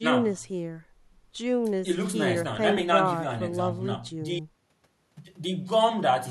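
No technical faults can be heard anywhere in the recording.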